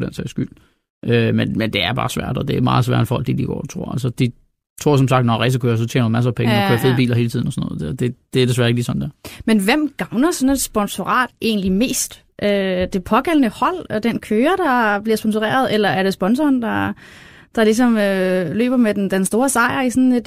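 A speech recording with sample clock jitter from 17.89 to 19.58 s. The converter's timing wanders by a few microseconds, so each sample lands slightly off its proper instant, and the resulting error, roughly 30 dB below the speech, shows up as a gritty hiss clinging to loud, bright syllables and sibilants. Unlike steady background noise from a preamp, this roughness tracks the signal's slope and drops away in pauses.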